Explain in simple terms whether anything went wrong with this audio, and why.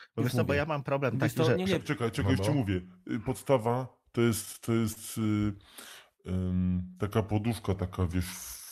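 Two things go wrong here. From about 1.80 s to the end, there's a section at the wrong speed: the speech slows to roughly 0.84 times its proper pace, so the voice drops by around three semitones and sounds deeper and draggier. Speed and pitch sink together, the way a recording sounds when it's played back against the wrong clock, which is likely what happened here.

Then, between 4.45 s and 5.38 s, you get repeated stalls (stutter). The audio keeps catching for a split second, with the longest catch about 36 ms. That's what happens when the incoming stream keeps arriving a little too late: the player runs dry, holds the last bit of sound to bridge the gap, then carries on. Nothing actually gets lost, but in total about 116 ms of that stretch is padding.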